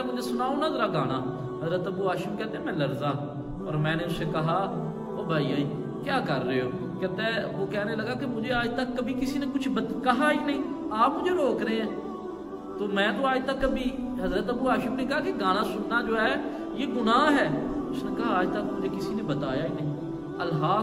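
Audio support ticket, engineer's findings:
No faults found: signal path checks out with nothing audible to attribute to capture, processing, transmission or playback.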